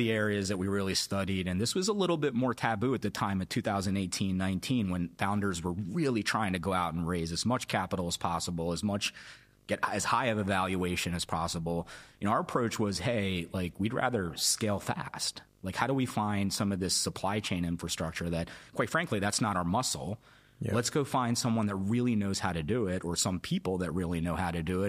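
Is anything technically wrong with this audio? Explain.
Yes. Video or display buzz runs through the whole speech clip. A screen or video cable couples into the audio path. It adds a 50 Hz field-rate buzz with hash above it and a thin 15.6 kHz line tone, roughly 30 dB below the speech.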